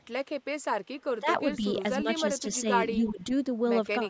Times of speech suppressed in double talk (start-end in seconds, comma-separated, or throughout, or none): 1.20-1.64, 2.03-2.07, 2.96-3.32